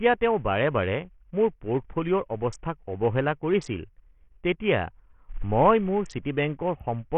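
Throughout the clip, the speech sounds dull and gritty. Nothing reaches above about 8.8 kHz, and the upper detail flickers in and out. The likely cause is Bluetooth SBC compression at a starved bit pool, which fits a rate near 48 kbps.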